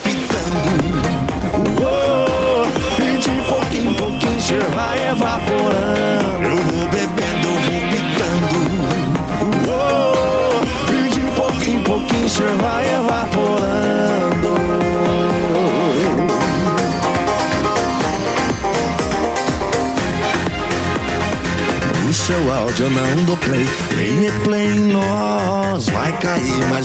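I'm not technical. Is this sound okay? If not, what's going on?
No. There is gain pumping throughout the recording, from start to finish. The likely cause is a microphone level set far too high, with automatic level control quickly turning it down on each loud moment and back up afterwards. This leaves loud and quiet parts squashed closer together.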